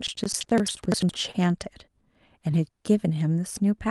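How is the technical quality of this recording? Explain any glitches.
The quality takes two hits early on, both within the first second and a half of this speech clip.

From 0.00 to 1.13 s there's buffer tearing. The writer and the hardware reader of the ring buffer have slipped and keep crossing mid-period, so about a fifth of each chunk is stale audio from roughly a third of a second earlier. The hard joins give a rattly 11.7 Hz buzz, which fits a 2048-sample buffer.

At 1.31 to 1.36 s there's a short concealed packet loss. About 20 ms of audio didn't arrive in time, so the receiver stretched the preceding sound over 24 ms and blended back in. You hear it as a quick smear or wobble. Behind both faults, the call path tops out around 12 kHz.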